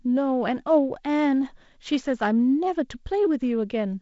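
No technical faults can be heard in the speech, which carries the sound of G.722 wideband telephone coding, with content reaching up to 7.7 kHz and nothing above it, and the light extra noise in the lower band points to the codec running at 48 kbit/s.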